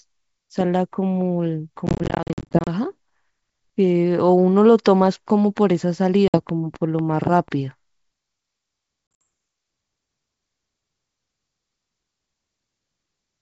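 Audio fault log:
1.87–2.68 s, packet loss on an ADPCM call: the sound breaks up into a flurry of short hard-edged gaps, about 410 ms missing in all across roughly 0.8 s, with no single hole longer than 50 ms, so it stutters rather than drops out. Each return comes back with some roughness, because the receiver's adaptive predictor and step size had drifted from the sender's during the missing stretch and need tens of milliseconds to fall back into step.
6.28–6.38 s, packet loss on an ADPCM call: about 60 ms lost, squared off at the edges, after which the sound resumes with a faint distorted edge while the decoder's state re-converges.
9.12–9.22 s, packet loss on an ADPCM call: gaps totalling about 110 ms within 140 ms, the longest about 60 ms, followed by the same short, slightly distorted recovery.
6.49–7.49 s, train of clicks: a run of five or so identical sharp ticks, evenly spaced at about four per second and standing out clearly above the sound, around 5 dB over it, audible in gaps as well as under the signal. 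The steady pace and unchanging shape point to a repeating electrical pulse, likely interference from nearby equipment or a faulty connection or power supply.
Throughout, G.722 wideband telephone coding at 64 kbit/s: clear speech up to about 7 kHz, with at most a faint hiss in the upper band.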